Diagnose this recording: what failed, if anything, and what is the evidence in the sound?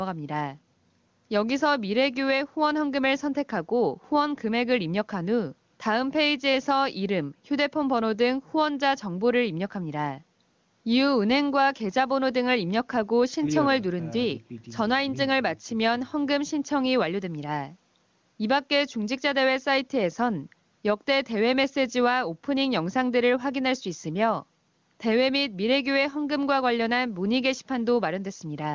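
No fault is audible: the recording passes through a call's microphone processing, with nothing above 8 kHz, and through the AMR wideband (HD Voice) codec, which at a rate consistent with its highest mode leaves at most faint coding traces.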